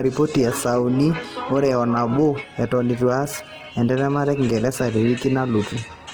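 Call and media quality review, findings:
Opus compression throughout, likely a low-rate Opus encode in CELT music mode, consistent with roughly 16 kbps. Starved bands are refilled by folding and noise, so speech turns grainy and rough, plainly audible. Bandwidth stays full, with content reaching 20.2 kHz.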